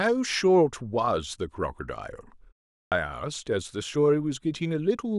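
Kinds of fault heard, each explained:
Clipped start after a pause: after a 0.39 s silence, the output wakes late and swallows about 87 ms at 2.83 s, so speech resumes abruptly without its first sounds.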